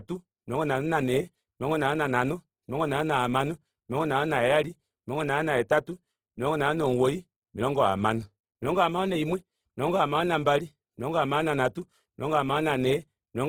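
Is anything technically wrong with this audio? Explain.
Yes. Throughout the speech there is plainly audible Opus compression damage, likely from encoding in its CELT music mode at a low rate, around 16 kbps. The encoder preserves each band's energy and, short of bits, fills detail by folding lower bands or injecting noise, so the voice sounds grainy, rough and noisy rather than hollow. Unlike MP3, there is little swirling or warbling from spectral holes, and content still reaches about 20.4 kHz, so it isn't the muffled bandwidth narrowing of Opus's speech mode.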